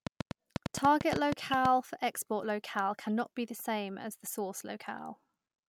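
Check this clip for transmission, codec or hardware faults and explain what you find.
Two faults are present: a train of clicks near the start and a corrupt frame decoded later in the speech.

The train of clicks runs from 0.07 to 1.66 s, ending just before "for export locale". Around fifteen similar pulses arrive at an irregular pace, about 7.6 per second. They sit well above the speech level. The likely cause is interference from nearby equipment or a struggling interface injecting repeated pulses. It sounds like uneven ticking laid over the talker.

The corrupt frame decoded falls at 3.07 to 3.09 s, right after "for export locale". A couple of compressed frames carried flipped bits. The decoder played them anyway. Misread codes placed energy at the wrong frequencies for the length of the damaged frames. The result is a brief, fairly quiet blip or chirp, about 20 ms long, that does not belong to the speech.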